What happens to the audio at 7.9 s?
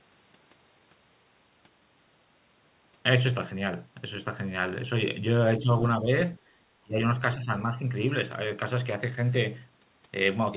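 At 7.9 s the speech sinks into a brief dip lasting from 7.68 to 7.96 s, about 200 ms in all, at worst roughly 10 dB down. This is likely speech suppressed in double talk: the echo canceller, unable to separate near talker from loudspeaker echo, attenuated both. The waveform shows a sudden narrowing of the envelope, and the spectrogram a fainter band, already capped at 4 kHz by the call codec.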